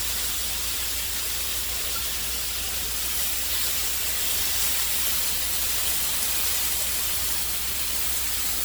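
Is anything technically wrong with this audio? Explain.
Yes. Throughout, the sound is swirly, smeared and hollow, with blurred attacks: generation loss, likely from about four successive MP3 passes near 92 kbit/s, each requantising on a shifted frame grid. A spectrogram shows patchy spectral holes and nothing above 20.1 kHz.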